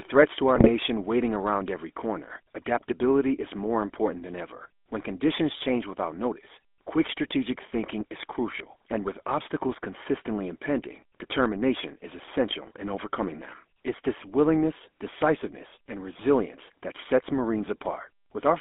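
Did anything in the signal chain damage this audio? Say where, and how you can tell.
Yes. The codec stage damaged it throughout. The speech has the buzzy, gravelly roughness of the GSM full-rate codec, band-limited to about 250 Hz to 3.5 kHz. Regular-pulse excitation with decimated residual produces this texture, which fits a 13 kbps full-rate stream.

The network link caused GSM bit errors from 0.56 to 0.68 s. For that brief stretch the speech squawks and gargles. Corrupted filter, pitch and gain parameters distorted the decoded spectrum and level across several consecutive frames, pointing to a badly degraded radio link.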